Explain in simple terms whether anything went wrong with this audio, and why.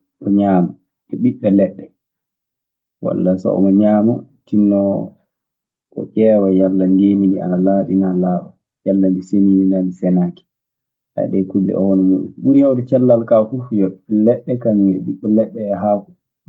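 Nothing went wrong in this speech recording. It came through an ordinary internet call using the Opus codec, so the very highest sounds above about 12 kHz are trimmed away, which is normal for such calls.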